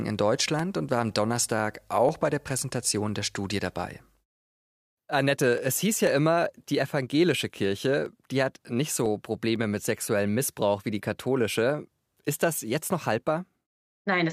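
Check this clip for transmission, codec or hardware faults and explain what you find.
The speech has periodic USB or driver dropouts from 0.1 s to 14.06 s. Every 0.499 s, a stalled bus or driver skips a fraction of a millisecond, leaving waveform discontinuities heard as regular ticks. A spectrogram shows about thirty evenly spaced thin broadband lines.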